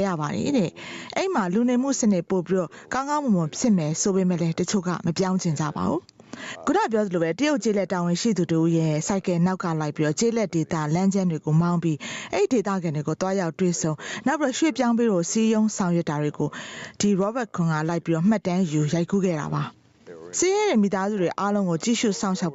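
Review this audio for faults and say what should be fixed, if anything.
Gain pumping runs throughout: the gain swings by around 15 dB under loud sounds, likely from excessive input gain driving a fast limiter. Unlike a noise gate, it rides the level down rather than muting it. Lower the microphone input gain so the limiter rarely engages.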